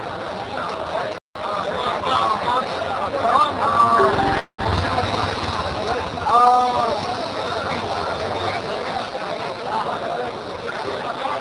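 A playback stall at 1.18 s cuts the audio off mid-flow for about 0.17 s of silence before it resumes, most likely because the player ran short of data or its output thread was briefly blocked. Time-compressed catch-up follows from 1.35 to 1.69 s: the player works off the backlog by dropping and cross-fading small slices, so the audio rushes along at 1.5 times normal speed while keeping its pitch. A long network dropout runs from 4.39 to 4.68 s. The receiver, likely starved of packets, stretches the last sound into a fading buzz or hiss for roughly a quarter of a second, drops to about 90 ms of silence, and returns with some 120 ms of the audio missing and the delay shifted by around 70 ms. Jitter buffer slow-down appears from 5.96 to 6.93 s and again from 8.97 to 9.59 s. The receiver rebuilds its reserve by repeating single pitch periods, adding 47 ms and then 43 ms, so the audio drags at 96% and then 94% speed without any change in pitch and with drawn-out sounds. 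Jitter buffer speed-up then runs from 9.67 to 10.77 s, where surplus buffered audio is trimmed by cutting out short pitch-period pieces, about a tenth of a second in total, so the audio moves at 107% speed at unchanged pitch and sounds hurried.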